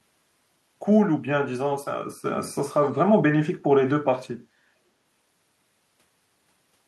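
A speech clip with a brief echo leak from 2.83 to 2.89 s: a faint delayed copy of the voice, arriving about 269 ms late and well below the direct speech, roughly 30 dB down. The likely cause is a far-end loudspeaker whose echo canceller let residual pickup return.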